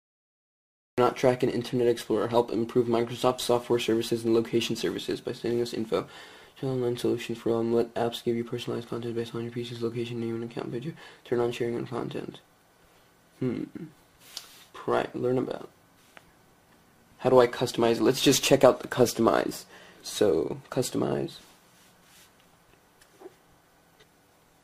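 Right at the top there's a cut-off start. The first 0.98 s is pure digital silence, and then the sound just appears partway through, with no attack or fade-in leading up to it. What's happened is the capture or stream kicked in late, so whatever was already going on got chopped off and you're dropped into it mid-sound at 0.98 s.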